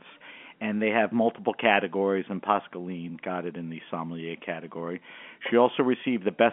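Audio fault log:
Nothing to log here, just speech carried over a telephone-style G.711 line, so the sound sits in the usual band of roughly 200 Hz to 3.4 kHz with nothing above about 3.7 kHz.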